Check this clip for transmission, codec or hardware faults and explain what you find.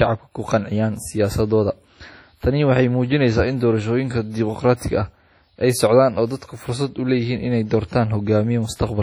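One codec fault runs through the whole speech clip.

WMA compression, throughout: the speech is most likely passed through a transform codec using long blocks, and the heavy damage fits an early WMA encoder at a low bitrate of about 32 kbps. Quantisation noise smears across tens of milliseconds and weak components drop out, giving a ringing, washy sound with hiss that swells and fades with the speech. Nothing is present above 19.9 kHz.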